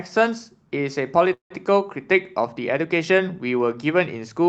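From 1.33 to 1.52 s the speech stalls in a call audio freeze: the last sound is stretched into a fading buzz, then about 120 ms of silence, before resuming intact but roughly 170 ms later, likely because delayed packets emptied the jitter buffer.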